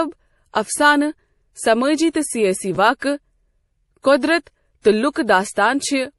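Throughout, the speech is dull with nothing above 11.5 kHz, and smeared artefacts from two codecs overlap, likely transcoding between lossy codecs, consistent with MP3 near 48 kbit/s then AAC-LC near 64 kbit/s. At 2.75 to 2.77 s, chunks arrive out of order: a 10 ms chunk plays one position late, producing a brief jumbled moment with three hard joins.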